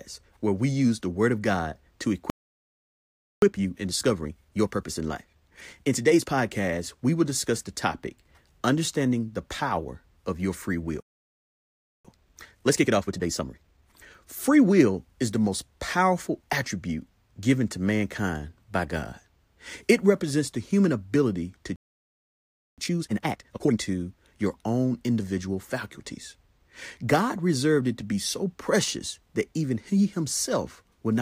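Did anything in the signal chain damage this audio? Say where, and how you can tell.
Yes, at the playback stage. Playback stalls at 2.3 to 3.42 s, 11.0 to 12.05 s and 21.76 to 22.78 s (after "the human ability to") cut the speech to silence for about a second each, 1.12, 1.04 and 1.02 s. The likely cause is the player running out of buffered data or its thread being blocked.

Time-compressed catch-up follows each gap. Speech is hurried at normal pitch: 1.25x from 3.42 to 6.42 s, ending before "we will discuss the"; 1.5x from 12.05 to 14.13 s, after "power of your free" and the gap; and 2x from 22.78 to 23.78 s. The player drains its backlog by cutting and cross-fading short slices.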